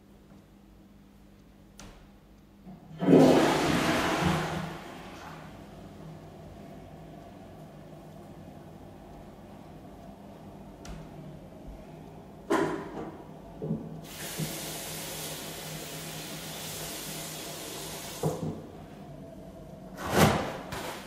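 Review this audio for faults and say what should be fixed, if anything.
From 19.09 to 20.71 s the sound slows by 5.88% and drops 105 cents, just over a semitone, then snaps back to normal. This is a drift correction step, likely from clock-matching software changing the playback rate abruptly to rebalance its buffer. To prevent it, have the resampler track clock drift continuously in small, gradual rate adjustments rather than one large jump.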